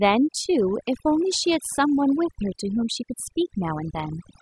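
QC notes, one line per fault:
throughout: overdone noise removal. The noise reduction stage on this speech was pushed far too hard, so any frequency band sitting close to its noise estimate gets driven down or shut off entirely, and the softer parts of the speech are cut away along with the noise. What remains is a background that drops away, sprinkled with twinkling specks where isolated bands flicker on and off.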